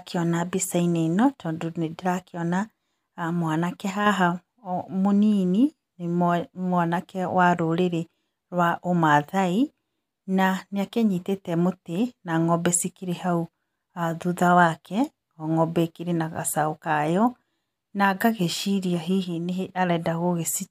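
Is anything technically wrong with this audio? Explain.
Yes. One channel drops out, from 3.90 to 4.06 s and again from 19.24 to 19.69 s: the speech abruptly falls about 6 dB and then returns, likely because one stereo channel briefly went silent, so the mono sum lost half of the shared signal.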